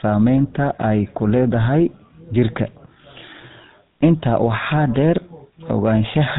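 GSM full-rate codec damage runs through the whole of this speech clip, and it is plainly audible. The codec rebuilds the voice from a vocal-tract model driven by a sparse, regularly spaced pulse excitation, which gives the speech its buzzy, gravelly roughness, a coarseness that fits a bitrate of about 13 kbps. Nothing survives above 3.8 kHz, so sibilants and the upper harmonics are missing and the voice sounds narrow and dull.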